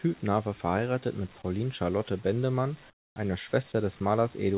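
Comfort noise in place of the background from 2.9 to 3.16 s in this band-limited speech, cut off above 4 kHz: the pause's real background drops to a flat, featureless hiss about 21 dB quieter, likely from discontinuous transmission.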